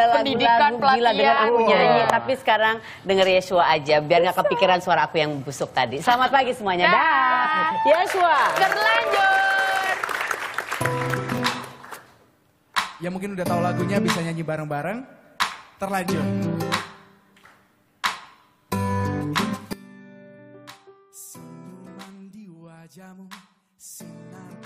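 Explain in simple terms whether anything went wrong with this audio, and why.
From 19.73 s to the end of the clip, the sound suddenly becomes much quieter, with almost all of it gone, background included. The likely cause is one channel inverted: one side of the stereo pair is flipped upside down, so when both sides are combined into one, everything they share cancels out. A plain volume drop would shrink everything evenly; here whatever both sides share disappears, leaving only a faint remainder of what differed between them.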